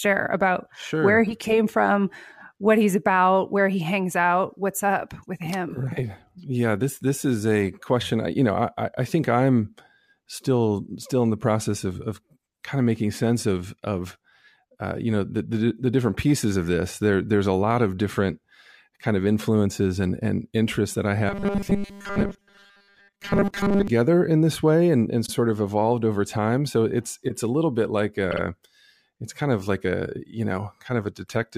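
Robotic sound from repeated short buffers runs from 21.29 to 23.88 s in this speech recording. The voice becomes a rigid metallic buzz fixed at 200 Hz while still loosely tracking the words. This likely comes from audio arriving too seldom, with the last 5 ms looped to fill the gaps so that most of the real sound in that stretch is skipped. Repeated frames follow at 25.25 s and again at 28.31 to 28.41 s. Each time a block of about 52 ms, which fits a pair of compressed frames, is decoded again. At 25.25 s it plays once more, adding 52.2 ms. At 28.31 s it plays two extra times, adding 104.5 ms. The result is a short stutter.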